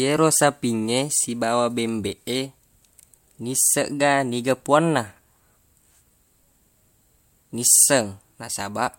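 Listening closely to the speech, nothing stood out as a technical problem at any point.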